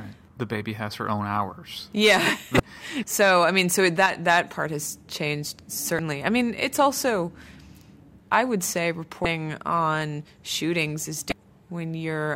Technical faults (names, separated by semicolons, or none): damaged data in a compressed stream; one channel drops out